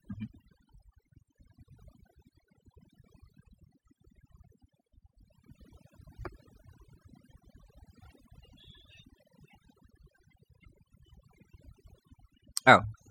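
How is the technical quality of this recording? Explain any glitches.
The background drops and breaks up into twinkling, warbling specks throughout the clip. This is overdone noise removal: the reduction was set so hard that frequency bands near the noise level were cut away, taking quieter parts of the voice with them.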